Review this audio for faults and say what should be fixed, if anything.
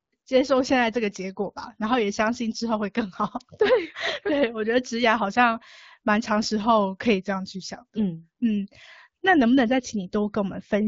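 Nothing here needs fixing; the speech comes through the AMR wideband (HD Voice) codec at 12.65 kbit/s, with only the light coding character you'd expect at that rate.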